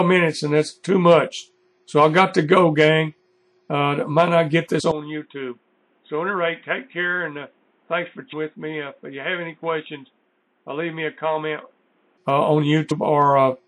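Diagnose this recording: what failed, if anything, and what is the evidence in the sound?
Codec stage: the whole clip has a watery, swirling texture with a clipped treble and smeared attacks, most likely from MP3 compression at a low rate. That fits about 64 kbps, where weak frequency lines flicker on and off between frames and the top end is cut.

Storage or transmission stage: compressed frames skipped at 4.79 s, 8.32 s and 12.90 s. Each is a short smeared blip where the audio jumps ahead, by roughly 70 ms, 300 ms and 200 ms respectively. That is consistent with whole 24 ms frames being lost or rejected by the decoder.

Capture stage: at 4.91 s the sound turns dull and boxy, with nothing above 3.8 kHz. The level drops by roughly 10 dB and a new noise floor appears around 40 dB down, with no gap. Full bandwidth returns at 12.18 s. The likely cause is an input switched to a poorer device mid-recording.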